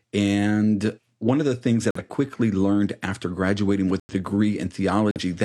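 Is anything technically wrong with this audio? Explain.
Yes, there are abrupt dropouts in the speech, heard as sudden silent holes of about 0.1 s with timing intact. This is corrupt frame muted: damaged compressed frames, roughly two each time, were rejected and replaced with silence. The holes fall at 1.91 to 2.02 s, between "one of the things" and "quickly learned after graduating"; at 4.00 to 4.14 s, just after "quickly learned after graduating"; and at 5.11 to 5.21 s.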